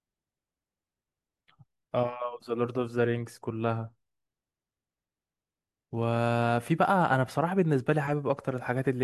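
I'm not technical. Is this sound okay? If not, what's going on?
Yes, this one's fine: nothing technical goes wrong anywhere in the speech, so there's nothing you need to worry about.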